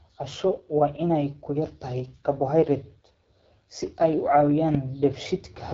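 From start to finish, the speech carries the AMR wideband (HD Voice) codec. Nothing reaches above 7.6 kHz. The damage is plainly audible. The speech sounds rough and raspy, with a gritty edge. This codec models the vocal tract and drives it with pulses, then fills the top band with shaped noise. At its lowest rates that model is too coarse, and the roughness here points to an 8.85 kbit/s stream.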